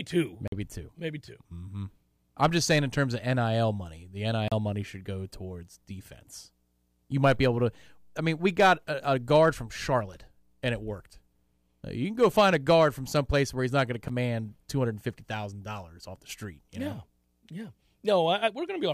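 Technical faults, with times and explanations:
0.48 to 14.09 s, blocks of digital silence: The speech drops out at 0.48–0.52 s (46 ms), 4.48–4.52 s (35 ms) and 14.08 s (12 ms). Edges are unfaded. The first and last gaps fit 2048- and 512-sample buffers filled too late.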